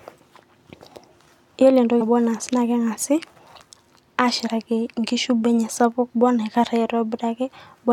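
Compressed frames are skipped at 2.00 s, 4.46 s and 6.13 s. Whole frames never play, so the speech jumps ahead. The jumps are roughly 150, 50 and 20 ms, which fits about seven, two and one 23.2 ms frames.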